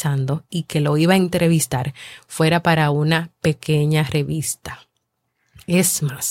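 A speech recording with nothing technically wrong with it.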